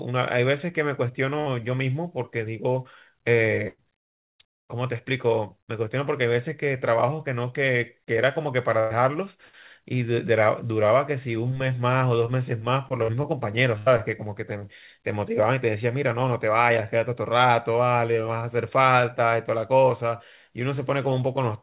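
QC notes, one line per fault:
1.40–1.48, 3.68–3.80, 8.80–8.93, 13.03–13.10, 13.78–13.88 s: burst of packet loss. Each time 60–100 ms of audio went missing, and the receiver repeated the last sound while fading it, heard as a short held buzz or hiss. The waveform shows a decaying loop, ending in about 20 ms of silence at 3.68 s. The spectrogram shows smeared repeated frames below the 4 kHz call-band ceiling, then a jump.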